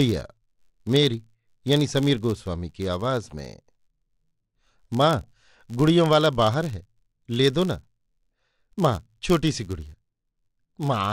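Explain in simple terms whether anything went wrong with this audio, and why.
Yes, something went wrong, and it lasts the whole clip. Under the speech there is a steady buzz at about 86 ticks per second, louder when the speech is louder. This is a filter restarted on every block. The audio is processed in short chunks, and the filter forgets its previous state at each new chunk, so every chunk starts with a tiny click. The tick rate fits a 512-sample buffer.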